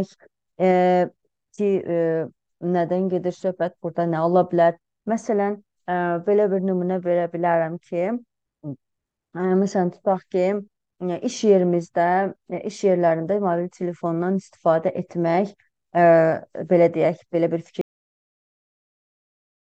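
At 17.81 s the clip has a cut-off end. The sound stops abruptly, mid-event. There is no fade and no natural decay. It drops straight into digital silence, which lasts about 2 s until the file ends. The final stretch of audio was never written out or played back. The buffers holding it were lost before they reached the output. What remains is a hard edge where the sound should have continued.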